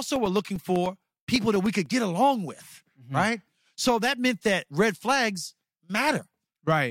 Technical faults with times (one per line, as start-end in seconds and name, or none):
0.06-1.86 periodic USB or driver dropouts